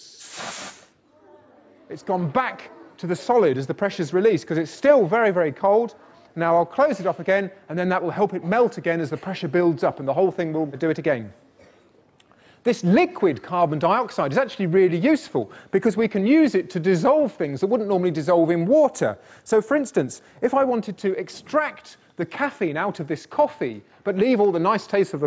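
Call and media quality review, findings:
Gain pumping throughout. Gain ducks under each loud sound, roughly 5 dB swing. Likely an over-driven mic input with a fast limiter riding it. Waveform: squashed, evened-out envelope. Spectrogram: band-limited to 8 kHz by call mic processing.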